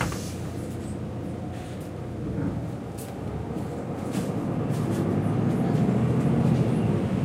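Sound recording with no audible technical faults anywhere in it.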